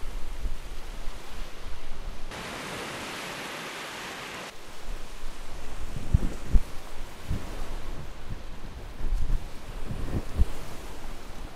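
At 2.31 s the everyday sound abruptly loses its top end. Nothing above 13 kHz remains, and the level drops by around 5 dB with no gap at the changeover. A faint new noise floor, roughly 40 dB below the signal, sits underneath. The duller, slightly quieter character persists until 4.50 s, when full bandwidth and level return. This is likely an input switched to a poorer device, whose narrower response and own noise replaced the original capture path for those two seconds.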